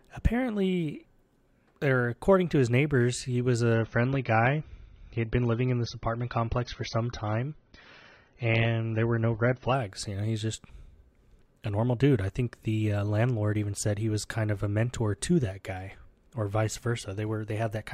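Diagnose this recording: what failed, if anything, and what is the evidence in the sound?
At the network stage the connection slowed, and the adaptive stream dropped to a lower bitrate from 3.74 s to 9.74 s, just after "his neighbors he was". With no gap, the speech abruptly loses everything above 6.3 kHz, which fits a switch from 96 to 24 kbit/s AAC.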